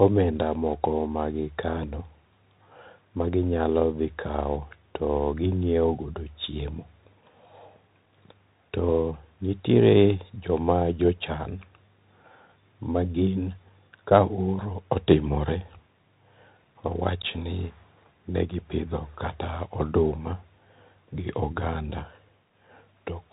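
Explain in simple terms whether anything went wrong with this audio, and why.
Something did go wrong, and it lasts the whole clip: the speech has passed through a Bluetooth CVSD headset codec, the basic narrowband link used by wireless headsets for calls. Everything above about 3.8 kHz is gone, so the voice sounds thin and boxed-in. The codec tracks the waveform with tiny up-or-down steps that can't keep pace with sharp, bright sounds, leaving s sounds scratchy and a gritty hiss beneath the speech.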